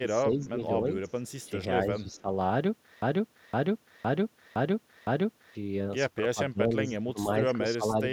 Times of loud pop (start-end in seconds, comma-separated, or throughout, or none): none